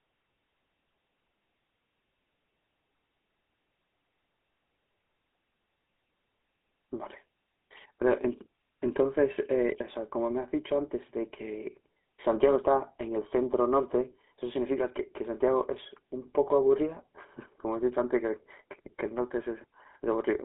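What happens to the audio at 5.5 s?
At 5.5 s, as throughout the clip, the speech sounds buzzy and gravelly with nothing above 3.8 kHz, which points to the GSM full-rate codec at 13 kbps.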